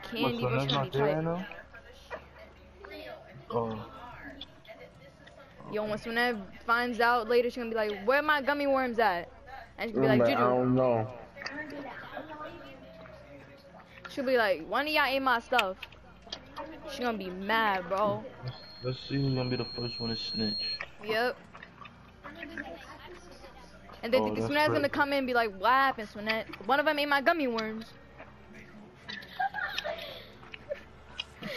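Loudspeaker feedback squeal from 18.54 to 20.82 s: a 4.2 kHz tone swells over about two seconds to roughly 5 dB below the audio, as the microphone re-amplifies its own loudspeaker.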